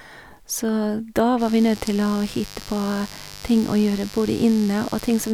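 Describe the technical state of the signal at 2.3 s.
At 2.3 s the speech carries mains buzz, running from 1.37 s to 5.33 s at around 20 dB below the speech. Switching spikes at 100 Hz give a raspy hum. A spectrogram shows stacked 50 Hz harmonic lines into the kilohertz range; the waveform shows spikes 10 ms apart.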